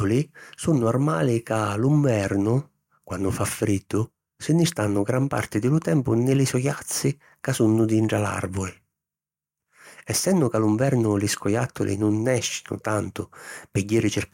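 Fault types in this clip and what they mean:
Nothing here to flag: listening through the speech, there are no dropouts, glitches or other faults to pick out.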